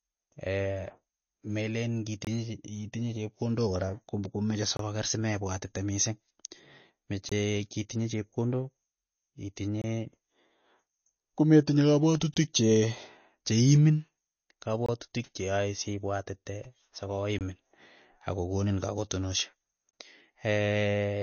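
A speech recording with two faults. Throughout, the sound is band-limited, with nothing above about 6.6 kHz, and it carries a watery, swirling texture with metallic chirps on s sounds and softened consonant attacks. This is likely MP3 compression at a low bitrate, around 32 kbps. The encoder runs short of bits, cuts the treble at a fixed point, and lets weak frequency lines flicker on and off from frame to frame. A simple low-pass filter would dull the top end cleanly, so that swirling flicker is what marks this as codec damage.

The second fault is a gap between chunks. Short silent holes of about 23 ms appear at 2.25–2.27, 4.77–4.79, 7.29–7.32, 9.82–9.84, 12.34–12.36, 14.86–14.89, 17.39–17.41 and 19.91–19.93 s, spaced at 2.5 s chunk boundaries. Silence has been inserted at each join. Unlike a dropout, the sound on either side continues intact, and the strict regular spacing marks it as a chunking fault rather than random loss.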